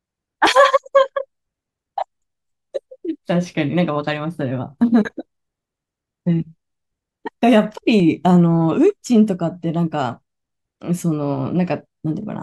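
Dropped buffers (overrun) occur at 0.47 s and 2.22 s. Each is heard as a jump where the speech lurches forward with no gap. The cause is likely that the recording software fell behind and the hardware overwrote samples before they were collected, so the sound on either side was spliced together. About 20 ms goes missing at the first point and around 40 ms at the second.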